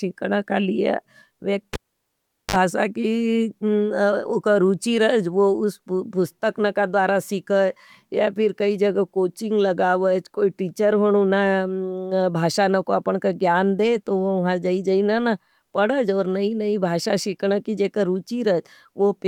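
A pop at 1.73 s drops this speech clip to near silence for about 0.77 s, then a 48 ms burst of 50 Hz buzz and another pop as sound returns at 2.56 s: a cable pulled and plugged in while live.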